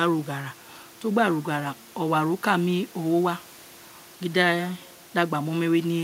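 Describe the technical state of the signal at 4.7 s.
At 4.7 s the speech signal is intact, with no dropout, clipping, glitch or other fault to be heard.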